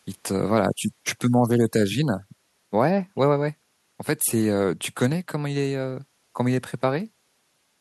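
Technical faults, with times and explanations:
No technical faults are audible.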